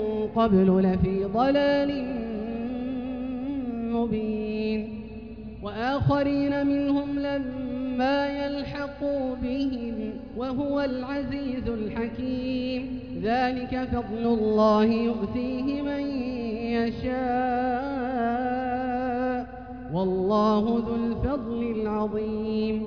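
No technical faults can be heard anywhere in the audio; the signal holds steady throughout.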